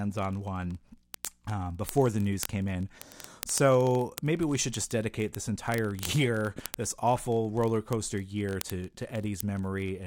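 From 0.10 s to the end of the speech, word clock ticks run throughout. A digital link is being read by a device on its own clock, not locked to the sender's, with the two clocks disagreeing by roughly a thousand parts per million. Each time they slip past each other, a few samples are misread and one is dropped or repeated. That happens about every 20 ms, hundreds of times over, so the ticks merge into a continuous rattle or buzz under the speech.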